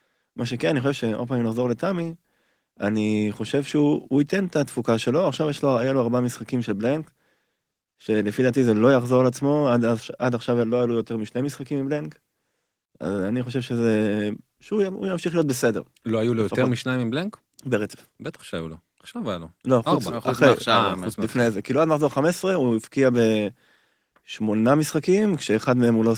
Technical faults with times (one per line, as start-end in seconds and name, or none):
none